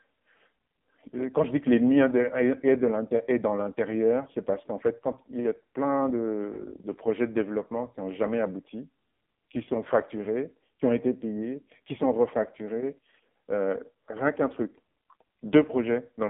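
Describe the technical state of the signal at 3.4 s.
At 3.4 s the speech is passing through the AMR narrowband mobile codec, as it does for the whole clip. The signal has been squeezed into an 8 kHz telephone path and rebuilt from a vocal-tract model excited by sparse pulses, and the heavy damage fits one of the lowest AMR-NB modes, around 5.9 kbps. The result sounds buzzy and synthetic, confined to roughly 150 Hz to 3.7 kHz, with nothing above 3.8 kHz.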